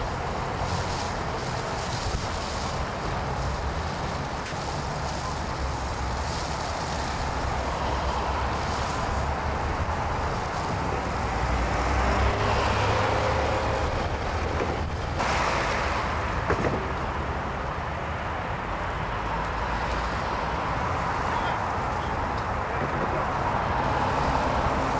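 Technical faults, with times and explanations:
4.46 to 4.52 s, sound dropped by the voice detector: the sound gives way to 60 ms of steady, featureless noise, then returns. The sender's voice detector likely mistook this stretch for background and stopped sending, so the receiver played comfort noise in its place.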